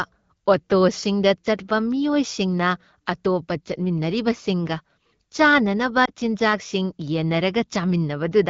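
At 6.05 to 6.10 s, just after "ꯃꯤꯑꯣꯏꯁꯤꯡꯅ ꯑꯇꯣꯞꯄ ꯆꯠꯃꯤꯟꯅꯔꯤꯕꯁꯤꯡꯒ ꯆꯥꯅꯅꯕ", lost AMR speech frames occur: the wideband decoder patches a gap that fits one missing 20 ms frame by repeating the previous pitch and vocal tract settings at lower gain, producing a brief dip or warble before the speech recovers.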